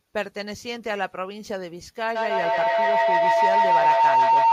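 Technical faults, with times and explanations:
2.15–4.53 s, feedback howl: sound loops from loudspeaker back into a microphone, gaining level each pass, and a tone near 1 kHz swells to about 10 dB above the speech, with the loop repeating roughly every 150 ms. Spectrogram: a brightening horizontal line. Waveform: a swelling envelope.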